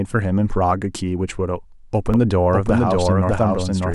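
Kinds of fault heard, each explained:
Doubled audio track: the speech was likely captured a second time through a slower path, so from 2.14 s a full-band copy cuts in abruptly, trailing about 0.7 s behind at roughly equal loudness, dry and undecaying, until the end.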